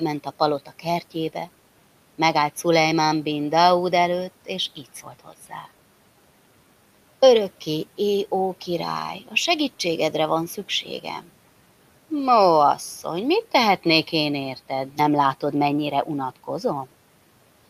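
At 0.66–0.85 s and 5.25–5.52 s, speech is cut by the noise suppressor, which mistakes quiet speech for noise and pulls it down by about 8 and 10 dB. Unlike a dropout, the sound never vanishes; it briefly sinks and sounds swallowed.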